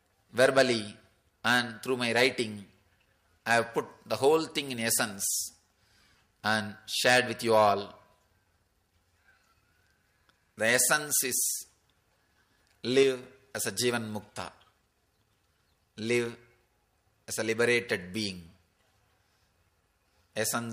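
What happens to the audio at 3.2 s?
Nothing goes wrong at 3.2 s; the audio plays through that moment intact, with no dropout, click or distortion.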